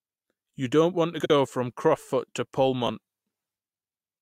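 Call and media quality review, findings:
Frames out of order, 1.19–1.30 s: garbled flutter. Two adjacent runs of about 57 ms each decoded swapped, which fits four-frame runs. Probable component: jitter buffer or packet reordering. No time lost.

Frames out of order, 2.87–2.89 s: shorter stretch with halves exchanged. Runs of about 11 ms each, swapped in the same reordering fault. No time lost.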